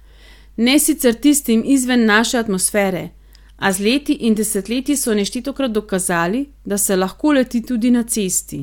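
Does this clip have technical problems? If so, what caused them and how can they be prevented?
Yes. From 3.38 to 5.38 s the speech switches abruptly, with no gap, to an adaptive stream at a lower bitrate: the top end drops below 16.3 kHz, fitting a step from roughly 96 kbit/s AAC to 32 kbit/s HE-AAC, starting just before "dokazali da se lahko". A bigger buffer or higher minimum bitrate would prevent it.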